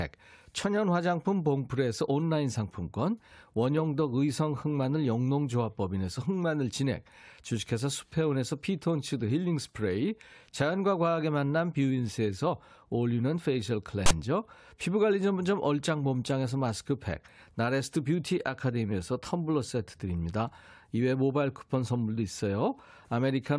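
A speech recording, interrupted at 14.06 to 14.11 s by a harsh, loud rasp lasting about 45 ms, with abrupt hard edges and a lopsided, one-sided character to the waveform. That burst is file tags played as audio: a block of text metadata embedded in the file was decoded as if it were sample data. Text characters cluster in a narrow range of byte values, so the junk sits offset to one side rather than centred, giving that buzzy static.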